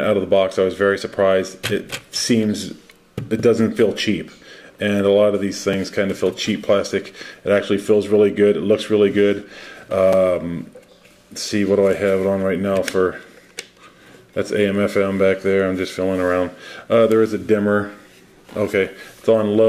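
A short tick lands at 5.73 s and another at 10.13 s, each a block of digital silence: about 3 ms and 5.8 ms of zeros, cut in and out with no fade. The second gap fits a 256-sample buffer left unfilled when its output was due.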